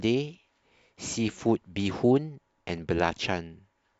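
No technical faults can be heard anywhere in the speech recording, and the signal stays intact and continuous throughout.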